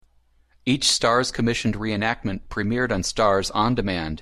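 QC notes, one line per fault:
No faults found in this speech clip; nothing to log.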